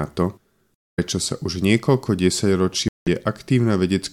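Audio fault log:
0.77–0.99 s and 2.88–3.08 s, Bluetooth dropout: audio packets likely missed their delivery window to the headphones and were discarded, so the speech drops to silence for 0.23 s and then 0.19 s, picking up further along as though it had kept playing underneath.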